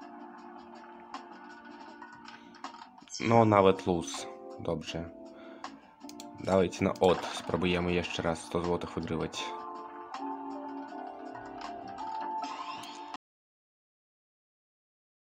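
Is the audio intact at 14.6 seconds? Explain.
No. An audio dropout to silence runs from 13.16 s to the end: the input was likely lost, leaving dead silence with no room tone.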